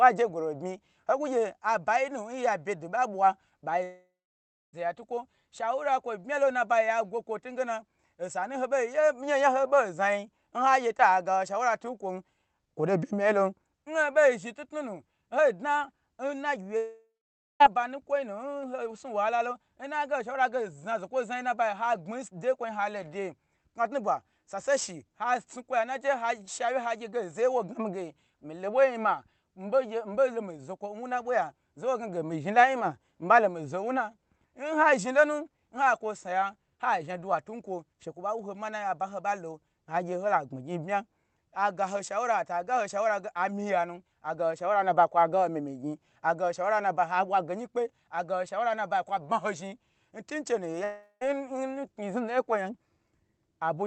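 At 3.83 s the speech drops out until 4.75 s, coming back on "ya tukwo shawura kwo". The last sound is stretched into a fading buzz, then about 0.6 s of near silence. The same happens from 16.77 to 17.62 s, with roughly half a second of silence, and more briefly from 50.84 to 51.35 s. This is likely a long network dropout, with the lost audio simply skipped over the call's 8 kHz codec path.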